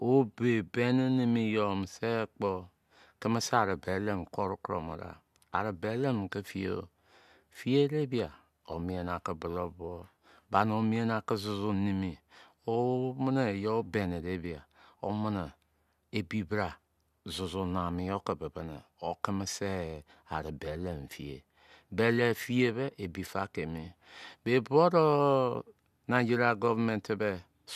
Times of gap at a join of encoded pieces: none

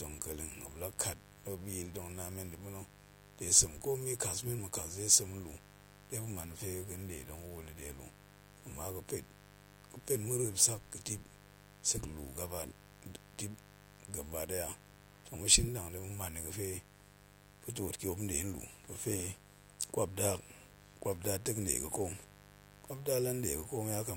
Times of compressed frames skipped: none

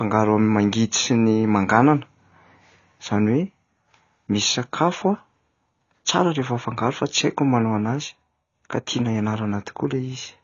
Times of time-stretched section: none

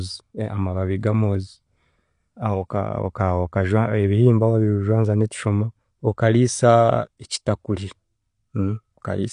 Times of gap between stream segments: none

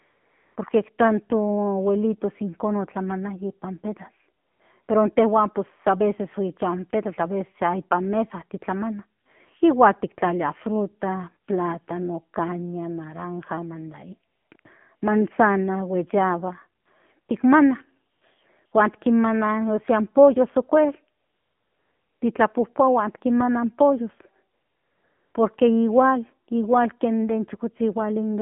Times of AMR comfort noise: 0.00-0.56, 4.42-4.88, 9.22-9.26, 14.32-14.64, 14.96-15.02, 16.82-16.86, 17.20-17.28, 18.12-18.22, 18.66-18.72, 21.20-22.22, 24.54-25.34

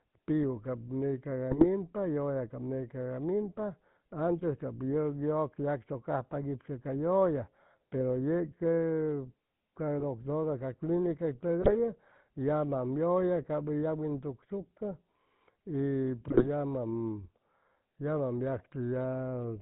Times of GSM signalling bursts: none

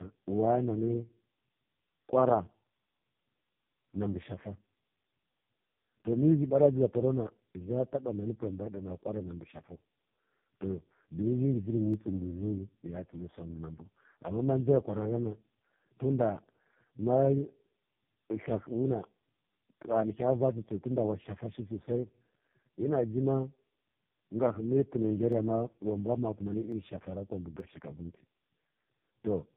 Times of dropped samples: 11.94, 25.32, 26.72, 27.60

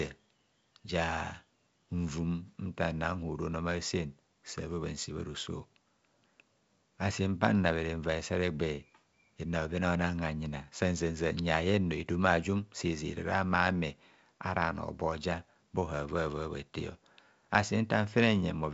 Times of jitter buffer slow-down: none

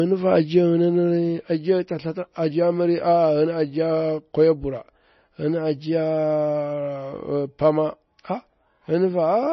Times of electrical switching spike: none

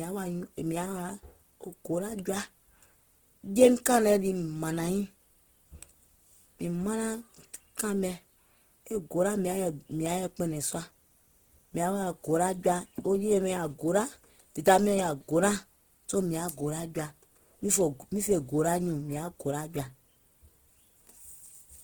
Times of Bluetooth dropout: none

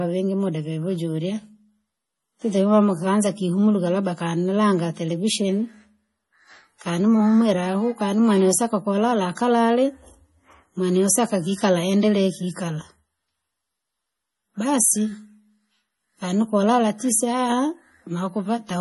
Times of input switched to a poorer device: none

